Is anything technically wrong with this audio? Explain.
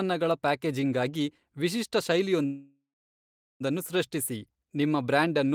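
Yes. From 2.45 to 3.62 s there is a call audio freeze: the speech stalls and the last sound is stretched into a fading buzz or hiss, then about 0.78 s of silence, before speech resumes where it left off. This is likely jitter-buffer underrun from delayed packets, which inserts a 1.15 s gap without losing any speech. On a spectrogram this appears as smeared horizontal bands thinning to a blank stretch, and on the waveform as a decaying tail followed by flat line.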